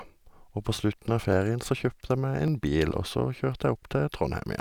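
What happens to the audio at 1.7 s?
A click breaks into the speech there, one of about four regular pops repeating every 1.15 s between 0.17 and 3.63 s. These are clock drift buffer slips, likely from two clocks disagreeing by roughly 700 ppm, so a buffer periodically drops or repeats a few dozen samples.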